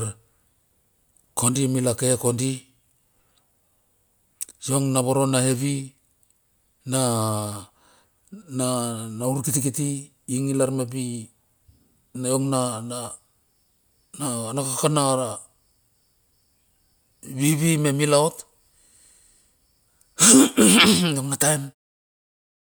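No technical faults can be heard in the speech. Near the end, the level eases down in a smooth fade out that begins at around 21.5 s and is complete by 21.75 s, with no click or hard edge.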